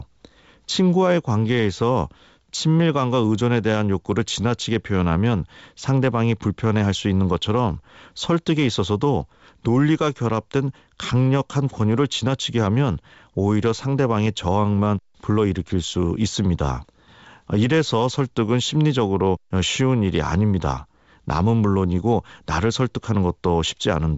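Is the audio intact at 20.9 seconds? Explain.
Yes, the audio is intact at 20.9 seconds, where only the normal band limit of G.722 wideband telephone coding is heard, with nothing above about 7.7 kHz.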